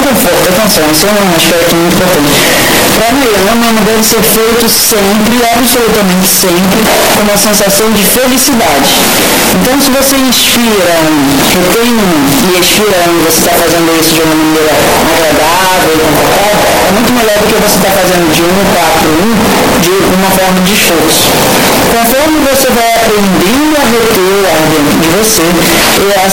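Float read as integer runs throughout all 26 seconds: a near-square, harsh, very loud waveform at an almost fixed, high level, likely from 32-bit float samples read as 32-bit integers.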